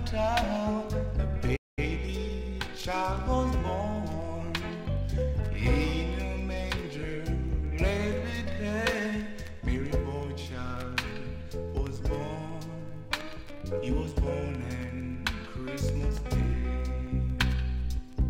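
At 1.56 s the sound cuts out for about 210 ms, resuming at 1.79 s. This playback stall was likely the player running short of data. From 1.79 s to 3.19 s comes time-compressed catch-up. The audio runs about 1.15 times fast at normal pitch, as small pieces are cut and cross-faded.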